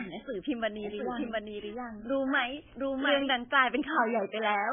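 Heavy MP3 compression runs through the whole speech clip: nothing sounds above about 3.5 kHz, and weak frequency detail flickers in and out, giving a watery, swirly texture with smeared onsets. That shimmering artefact, unlike a plain low-pass filter's clean dullness, points to a likely bitrate near 11 kbps.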